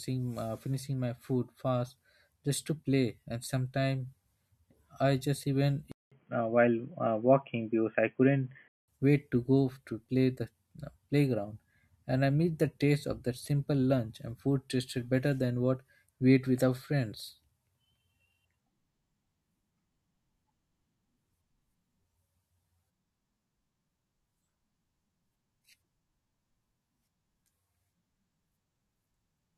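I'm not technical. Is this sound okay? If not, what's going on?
No. From 5.92 to 8.88 s, after "I just even" and until "wait to go to", the speech turns dull and boxy, with a brief 0.2 s silence at the switch. That is likely an input switched to a poorer device, cutting everything above 3.3 kHz.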